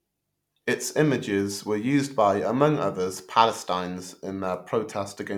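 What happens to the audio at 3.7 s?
Nothing goes wrong at 3.7 s; the audio runs through that moment intact, with no dropout, click or distortion.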